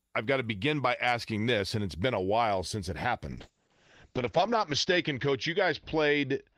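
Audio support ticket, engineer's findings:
Call bitrate drop from 3.37 s to end of clip. Speech turns rough and muffled; top end cut from 20 kHz to 8 kHz. Encoder forced from 32 to 7 kbps after bandwidth estimate fell; coarsest coding held about 1.2 s. No recovery before end.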